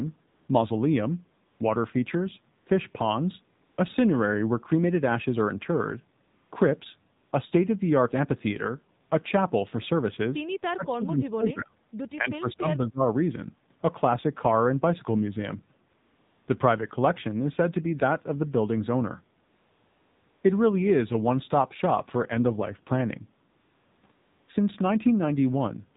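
Throughout, the speech sounds band-limited, buzzy and synthetic with nothing above 4 kHz, the AMR narrowband mobile codec at 7.4 kbps plainly squeezing the voice through its vocal-tract model.

From 0.28 s to 9.1 s, pauses repeatedly switch to a smooth, steady hiss lasting 40 to 280 ms. This is AMR comfort noise, with synthetic background standing in for halted speech frames.

Between 12.16 and 13.02 s, the voice dips sharply in pieces, falling by about 25 dB across roughly 0.7 s, likely speech suppressed in double talk by an echo canceller turning down both the talker and the loudspeaker echo.

The same comfort noise returns from 15.90 s to 24.48 s, mostly in longer stretches, up to 1 s at 19.44 s, masking the real background.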